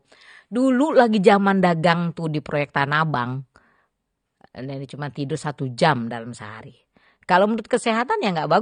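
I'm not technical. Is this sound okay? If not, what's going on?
No. The audio was likely squeezed by AAC compression, which throws away detail to save space. Throughout, the speech sounds dull and smeared, with nothing above about 9.7 kHz.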